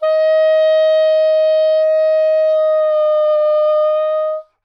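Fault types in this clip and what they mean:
No dropouts, clipping, distortion, noise bursts or other technical disturbances can be heard anywhere in this recording of sounds, and the signal stays steady and intact throughout.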